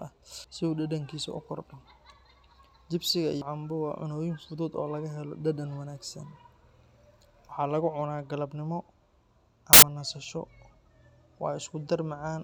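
Right near the start, from 0.26 to 0.44 s, and again from 3.32 to 3.42 s, you get compressed frames skipped. A chunk of the encoded speech, around a tenth of a second each time, never got played, either because it was missing or the decoder rejected it as damaged. The audio just jumps forward.

Later, from 9.73 to 9.88 s, there's a corrupt FLAC frame. Some bits in the stream got flipped and the decoder didn't catch it with the checksum, so from that point its prediction was working on bad numbers. You hear an error peaking at about -5 dBFS, lasting long enough to suggest it ran across two frames, and then the next clean frame brings the speech straight back.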